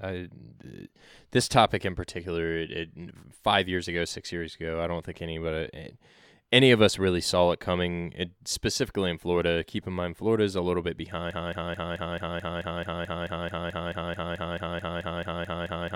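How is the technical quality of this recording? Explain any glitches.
The recording has one serious glitch, a broken-record loop. At 11.31 s, right after "is a little bit", a 218 ms fragment repeats exactly, back to back, 21 times until the end. The player or stream likely stalled and kept resending its last fragment. It sounds like a rapid mechanical stutter. The speech that should follow is lost.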